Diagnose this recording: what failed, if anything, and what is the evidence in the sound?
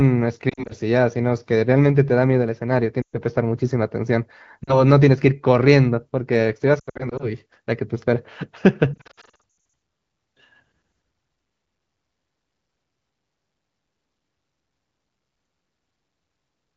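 Lost AMR speech frames on the radio link. Warbles and fades at 0.49–0.73, 3.01–3.17, 4.64–4.83, 6.79–7.32 and 8.94–9.40 s. The decoder repeats old frames with falling gain.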